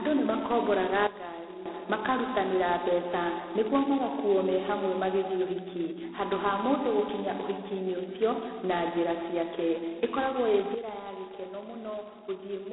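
A harsh, rasping hiss rides on the speech from start to finish, swelling and fading with its level, and the sound is confined to a narrow telephone band of roughly 250 Hz to 3.5 kHz, with nothing above 3.9 kHz. This is heavy G.726 ADPCM damage at 16 kbit/s: only 2 bits per sample code the error from an adaptive prediction, so quantisation noise is high and tracks the signal.

At 1.07 s, right after "nĩ makomboraga", the speech and its background drop abruptly by about 12 dB together, then snap back at 1.66 s before "makarutanĩra mbeca nĩguo magakuuo". At 10.75 s a similar step cuts everything by about 10 dB through to the end. Both are a sudden gain jump, likely a digital gain change applied between adjacent samples with no ramp.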